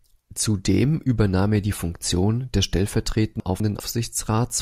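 At 3.4 s the speech scrambles for a moment, settling again by 3.8 s. This is chunks out of order. One 200 ms block of audio arrived late and was played one block behind where it belonged. So the two 200 ms pieces in that span swap places. No audio is missing. The order is simply wrong. Three hard joins result. The passage sounds jumbled and briefly garbled.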